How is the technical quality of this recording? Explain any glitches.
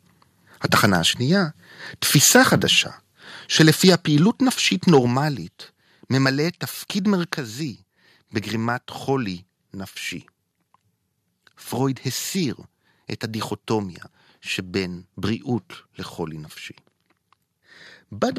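The recording has two linked problems in the first seven seconds: loud speech peaks distort, and then the input level drops in steps.

Microphone overload occurs at 0.73–0.86 s, 2.15–2.37 s, 3.59–3.95 s and 4.92–4.99 s, likely because the input ran about 3 to 6 dB above what the converter could take. The tops of the waveform are flattened, adding a crackling edge only on the loudest syllables. Codec distortion would instead spread across quiet passages too.

The microphone volume was stepped down at 3.89 s, 5.07 s and 6.48 s, by about 2, 4 and 2 dB. This is likely the call software reacting to the overload. The voice and background drop together, instantly and without a fade. The first step falls inside a distorted stretch and the second just after one, which separates this from a talker moving away from the microphone.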